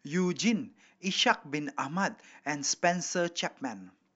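Nothing goes wrong anywhere in this bit of speech, so there's no technical fault to point to at any moment.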